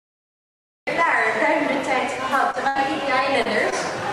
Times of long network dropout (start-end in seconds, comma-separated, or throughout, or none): none